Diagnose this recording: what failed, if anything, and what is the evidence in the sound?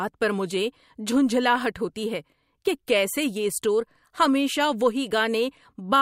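Dropped samples, likely at the driver or buffer. One sharp click at 1.56 s, before "ہوتی ہے کہ کیسے", where the waveform skips a fraction of a millisecond.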